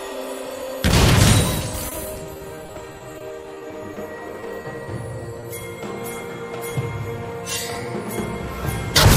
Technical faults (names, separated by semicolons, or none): repeated packet loss (robotic sound); short concealed packet loss